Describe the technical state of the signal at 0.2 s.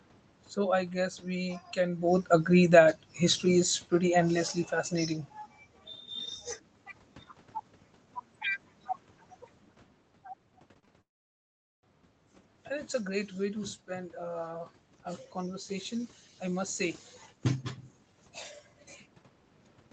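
At 0.2 s the signal is intact, with no fault at that moment.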